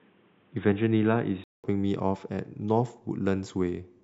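From the start to 1.64 s the speech is dull and boxy, with nothing above 3.8 kHz and a different, faint noise floor, then a 200 ms silence before full clarity returns. The gap and changed noise, at unchanged level, point to a likely input switch to a poorer device rather than simple filtering.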